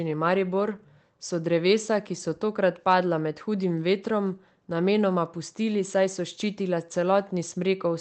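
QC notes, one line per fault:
No faults heard in this speech recording.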